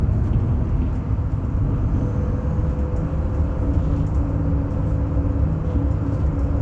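No technical faults can be heard in this recording.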